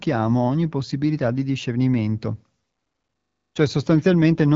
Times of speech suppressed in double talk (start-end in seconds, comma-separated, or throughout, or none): none